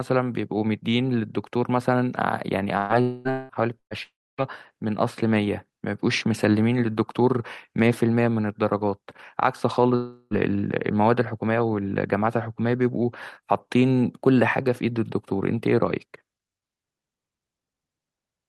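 Packets in this speech recording were lost in short bursts at 2.77 to 2.92 s and 3.79 to 3.94 s, a burst of packet loss each time. The receiver fills about 120 ms with a fading continuation of the last sound, which drops to near silence in the second burst, and then skips ahead. What is most likely a long network dropout accounts for four longer gaps, at 3.01 to 3.28 s, 3.31 to 3.52 s, 4.03 to 4.41 s and 9.96 to 10.34 s. Each is a concealed buzz or hiss of about 180 to 360 ms that fades out, falling into silence for much of the 4.03 s gap, before the speech resumes with that stretch missing.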